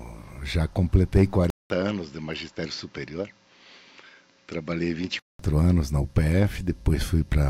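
At 1.50 s the sound drops out for 200 ms, then returns duller and about 10 dB quieter, with nothing above 7.6 kHz and a faint new background noise, until clearing at 5.39 s. The input was likely switched to a poorer device mid-recording.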